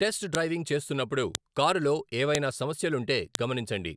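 File header played as audio in this speech at 0.35, 1.35, 2.35 and 3.35 s: sharp clicks every 1.0 s where joined pieces kept their header bytes, the first just before "డ్రైవింగ్ చేస్తున్నప్పుడు కారులో".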